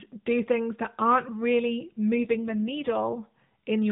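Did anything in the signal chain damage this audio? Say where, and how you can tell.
Yes. An AMR rate drop hits the codec stage from 2.15 to 3.21 s, just after "things that aren't really". The band and continuity stay intact, but the speech turns rougher and more synthetic. That fits the network forcing the AMR-NB encoder from 12.2 to 5.9 kbps on a weak link.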